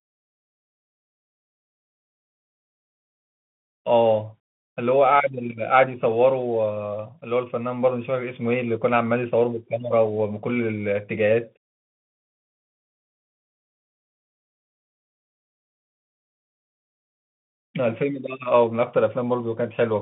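Speech running through a Bluetooth CVSD headset codec for its whole length: nothing passes above about 3.8 kHz, s sounds turn scratchy, and granular hiss sits underneath, fitting a 64 kbps one-bit delta link. Unlike a plain telephone band-limit, the grainy slope-overload distortion marks CVSD.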